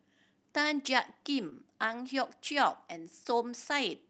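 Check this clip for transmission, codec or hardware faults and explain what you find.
Two brief dropouts appear in this speech. Short concealed packet loss occurs at 1.49 to 1.53 s and 3.23 to 3.27 s: about 20 ms of audio each time never arrived in time, so the receiver extended the preceding sound to bridge the gap, leaving a brief smear or wobble before blending back. The call-path top end stops around 8 kHz, consistent with a wideband Opus setting.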